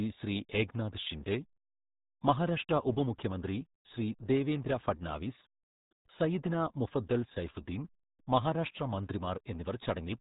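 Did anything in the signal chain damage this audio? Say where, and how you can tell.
Yes. The speech sounds muffled and gargly from start to finish, with nothing above 3.8 kHz and heavy codec damage. The fault is at the codec stage: the RealAudio 14.4 codec. Its coarse, band-limited coding fits an 8 kbit/s dial-up stream.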